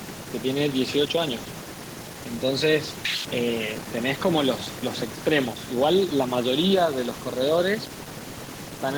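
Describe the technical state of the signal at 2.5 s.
At 2.5 s the speech signal is intact, with no audible dropout, distortion or other technical fault at that moment.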